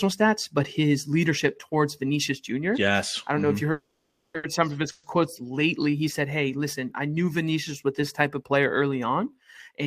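At 3.71 s the speech stops moving forward. This is a call audio freeze, likely caused by packets held up in transit, which left the jitter buffer empty. The receiver carries the last sound on as a fading buzz. It then goes silent for about 370 ms. The whole hold lasts 630 ms, to 4.36 s. Nothing is lost. The speech resumes where it stopped, just later.

Right after, from 4.36 to 4.45 s, comes a short stall from a late packet. One packet missed its slot. The last sound is stretched by 70 ms until it arrives. It is heard as a held sound with a slight buzz or dip. Nothing is skipped, but the delay grows again.

At 4.91 s a second call audio freeze begins. It runs to 5.05 s. Here 120 ms is filled with the fading continuation, with no silence. The speech then picks up from the same point.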